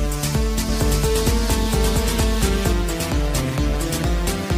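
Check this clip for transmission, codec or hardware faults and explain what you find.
One fault is present. From 0.69 to 2.73 s there is a doubled audio track: a second, equally loud full-band copy trails about 0.7 s behind, likely from a slower duplicate capture path, starting and stopping abruptly.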